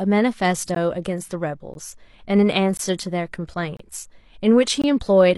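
Gaps between stream segments at 0.75 s, 1.74 s, 2.77–2.79 s, 3.77–3.80 s and 4.82–4.84 s cut hard-edged silences of 14 to 27 ms into the speech, once per second, where mismatched segment timestamps leave holes.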